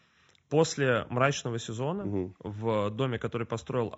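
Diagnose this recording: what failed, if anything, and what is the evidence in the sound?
Codec stage: the speech sounds rough and grainy throughout, with noise between the pitch harmonics and a dull, somewhat synthetic top band. The likely cause is low-delay AAC compression (AAC-ELD), whose short frames resolve harmonics poorly. The damage fits a bitrate around 32 kbps.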